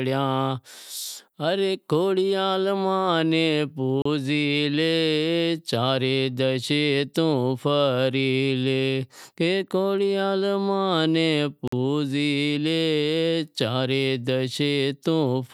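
Two brief dropouts to silence, at 4.02 to 4.05 s (33 ms) and 11.68 to 11.73 s (49 ms). These are likely Bluetooth stalls: interference delayed packets, the headphone buffer emptied, and playback paused until the resent data arrived.

From 13.87 s to the end, a faint hiss and roughness rides on the speech, strongest on loud and bright sounds and gone in the pauses. That is sample clock jitter: an unstable converter clock wobbling by around a microsecond, so the timing errors land roughly 45 dB below the signal.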